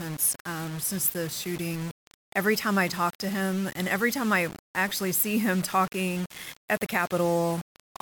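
From start to finish the speech carries a coarse, grainy distortion that rises and falls with the level, roughly 15 dB below the signal. Quiet passages turn gritty, and the softest moments collapse to silence or sputter as they flip between two steps. This is likely low bit depth without dither: the audio rounded to about 5 bits, leaving an error that tracks the waveform instead of sitting as steady background hiss.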